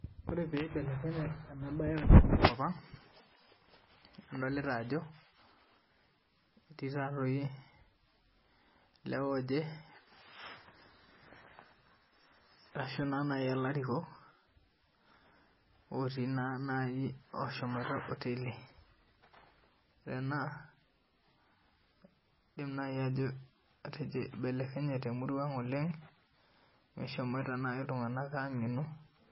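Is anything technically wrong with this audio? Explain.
Yes. Throughout the clip, likely heavy MP3 compression at a very low bitrate, around 16 kbps, strips everything above 5.6 kHz and drops weak frequency lines frame to frame, leaving the speech dull, watery and swirly.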